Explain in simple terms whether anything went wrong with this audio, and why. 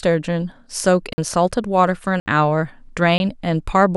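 Three blocks of digital silence hit the speech at 1.13, 2.2 and 3.18 s, brief holes of 50, 60 and 20 ms where the sound briefly cut out.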